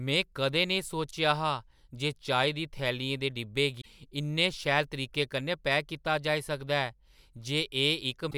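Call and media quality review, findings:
Brief glitch at 3.78–3.86 s after "दी थैलियें दे डब्बे", another at 8.27–8.34 s: damaged data in a compressed stream. The decoder misread corrupted frames, lost sync and jumped ahead to the next frame header.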